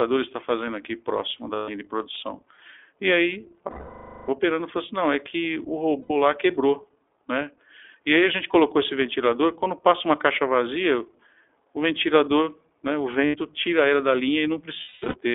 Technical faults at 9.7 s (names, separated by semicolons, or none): iLBC codec